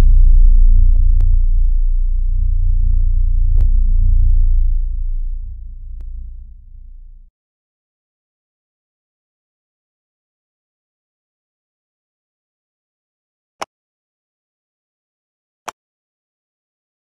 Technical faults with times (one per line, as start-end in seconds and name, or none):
1.21-15.59 clock drift buffer slips